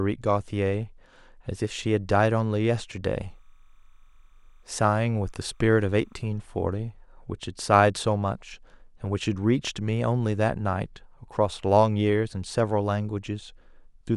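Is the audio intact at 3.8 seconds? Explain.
No. From 3.23 to 6.36 s the speech carries timecode bleed: linear timecode leaking from an adjacent track or cable, its square wave flipping between tones near 1 and 2 kHz. The result is a faint chirping warble, roughly 45 dB below the speech, with a rhythm that fits 29.97 fps code.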